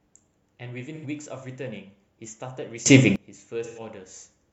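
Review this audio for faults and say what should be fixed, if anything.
AAC frame loss with concealment occurs at 0.95 to 1.05 s and again at 3.64 to 3.79 s. The decoder bridges the gaps of about 85 ms and 128 ms, which fits two and three lost frames, by reusing the last good spectrum. This leaves a brief smeared, noisy patch in the speech. To prevent it, protect the AAC stream with error correction or retransmission so that frames reach the decoder intact.

A sudden gain jump at 2.86 s raises the speech and the background noise together by about 22 dB, and the level holds until 3.16 s. The likely cause is a digital gain change applied from one sample to the next with no ramp. To prevent it, smooth every gain change over several milliseconds.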